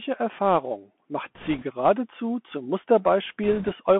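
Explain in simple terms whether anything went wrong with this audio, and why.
Yes, two things went wrong. Throughout, the speech passes through a Bluetooth CVSD headset codec: it sounds thin and muffled, with nothing above about 3.4 kHz, scratchy s sounds and a grainy hiss. Around 1.35 to 1.64 s and 3.44 to 3.72 s, bit errors on a Bluetooth voice link add bursts of rushing crackle. Unlike dropouts or digital clicks, there are no gaps or sharp pops, just noise.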